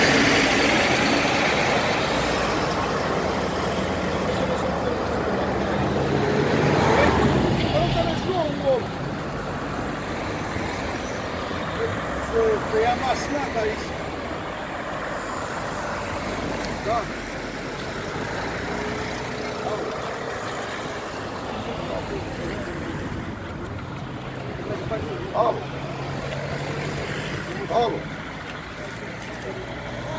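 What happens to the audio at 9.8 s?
Nothing goes wrong at 9.8 s; the audio there plays through intact, with no dropout, click, distortion or other fault.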